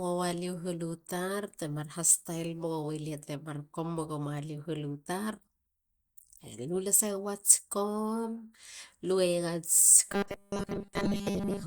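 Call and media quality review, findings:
Rigid metallic buzz over the speech at 10.09–11.67 s, pitch fixed near 200 Hz, speech contour still loosely audible. Robotic sound from repeated short buffers, likely a starved playout buffer looping its last chunk, which fits 5 ms repeats replacing most of the real audio.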